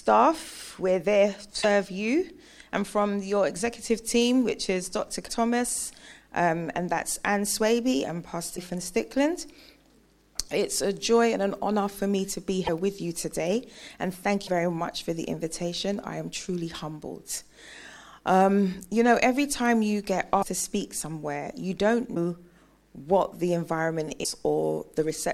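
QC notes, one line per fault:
1.62–1.65 s, 5.27–5.30 s, 8.56–8.58 s, 12.66–12.69 s, 14.46–14.49 s, 20.41–20.44 s, 22.14–22.17 s, 24.23–24.26 s: broken MP3 bit reservoir. Each is a garbled blip about one 24 ms frame long, likely a frame decoded against missing borrowed bits. It shows as a thin vertical stripe on the spectrogram and a jagged splice on the waveform.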